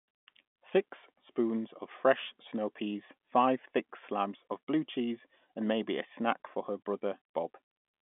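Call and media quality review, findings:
No faults found in the speech. The telephone band is audible as G.711 telephone coding, with sound confined to roughly 200 Hz to 3.5 kHz and nothing above 3.7 kHz, which fits a standard 64 kbps mu-law line.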